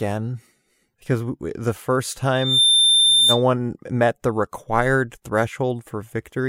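Speech, with a loudspeaker feedback squeal from 2.35 to 3.43 s, just after "we the first". The mic is catching its own speaker, and at 3.6 kHz the loop gain tops one. That tone swells over about a third of a second to a few dB above the speech, then drops away before "met the required".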